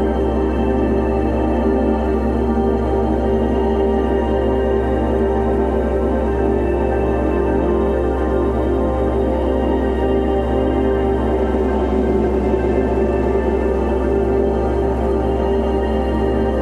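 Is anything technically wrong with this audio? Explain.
No, nothing stood out as technically wrong on listening to this audio.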